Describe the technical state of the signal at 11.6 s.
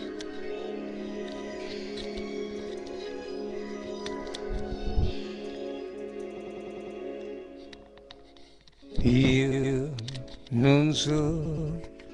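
At 11.6 s the signal is inside a repeated-frames fault running from 11.45 to 11.69 s. A 120 ms block of compressed audio was decoded twice more after its first play, so the same fragment stutters back and the audio runs 240 ms longer than the source.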